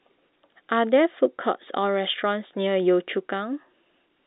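Nothing stood out on listening to this speech clip.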